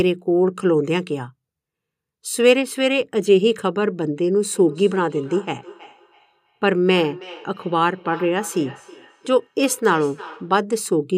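From 4.56 s to 10.66 s there is feedback echo between two devices: a second device in the room replays the call and the first device's microphone picks that up again, beyond its echo canceller. The speech returns at roughly 300 ms intervals, peaking about 19 dB below the direct speech.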